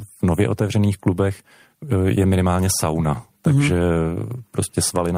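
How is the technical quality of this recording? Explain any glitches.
No glitches or technical faults are audible in this recording.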